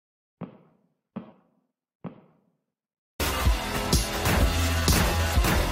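Nothing stood out as wrong on listening to this audio.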